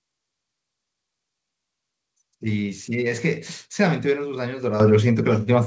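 At 4.8 s the microphone volume is stepped up: the call software judged the input too quiet and raised the device's input volume by about 9 dB in a single jump. The speech and the room background get louder together, at the same instant. That distinguishes it from a talker simply speaking up, where the background would stay put, and from a gradual gain ride, which would rise over time. The audio, carried through a call codec that fits G.722, has nothing above 8 kHz both before and after the jump.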